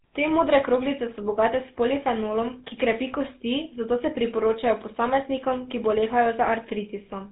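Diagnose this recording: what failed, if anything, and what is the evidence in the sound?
The speech passed through a GSM full-rate codec at the codec stage throughout, likely 13 kbps, giving plainly audible buzzy, gravelly roughness from its pulse-driven excitation, with nothing above 3.9 kHz.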